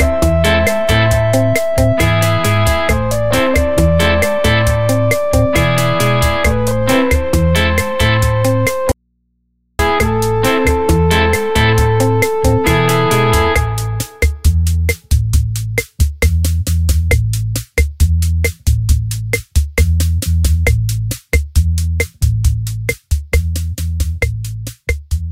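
From 8.92 to 9.79 s the sound cuts out abruptly for about 0.88 s: an audio dropout to a faint residue, leaving only mains hum roughly 50 dB below the signal. The likely cause is a live path after a break, as an open input picking up hum. A pause or fade would not start and stop this suddenly.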